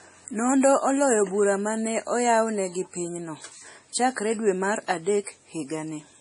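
From start to finish, the speech carries heavy MP3 compression, likely from encoding at a very low bitrate. Nothing survives above about 10.6 kHz. The encoder ran short of bits and cut the treble at that point. It also dropped weak frequency lines, and these flicker on and off between frames. The result sounds watery and swirly. S sounds turn metallic and chirpy, and attacks smear. The damage fits a bitrate near 32 kbps.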